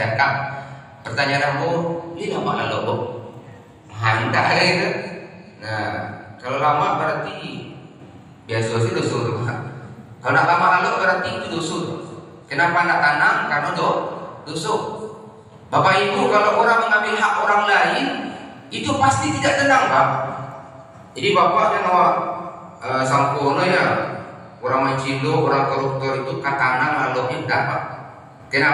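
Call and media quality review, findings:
No faults found across the reviewed audio. Nothing in the recording calls for a ticket entry.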